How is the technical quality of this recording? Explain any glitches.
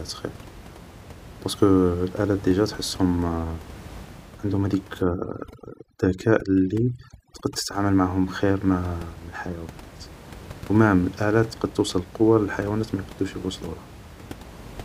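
The speech sits over room noise about 19 dB below it, and one stretch shows a processing fault. From 5.02 to 7.74 s there is overdone noise removal. An aggressive noise reducer cuts any frequency band near its noise estimate, taking quiet speech detail too. The background drops and breaks up into chirpy specks.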